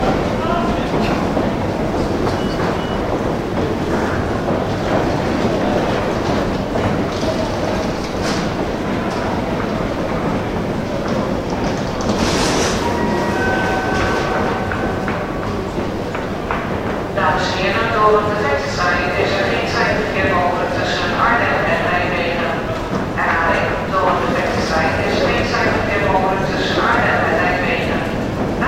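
Nothing stood out as a technical fault on listening to these everyday sounds.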